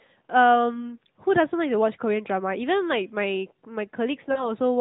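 Lost AMR speech frames at 0.75 to 0.97 s and 4.32 to 4.52 s break up this narrowband speech recording. One 20 ms frame drops first, then two frames (40 ms). Each time, the decoder covers the gap by repeating the last good pitch and vocal-tract settings at falling gain. The single lost frame gives a brief dip or warble, and the two-frame run sounds drawn out and fading, before the voice returns weak or rough for a moment. The AMR narrowband coding itself is light, which fits its 12.2 kbps mode.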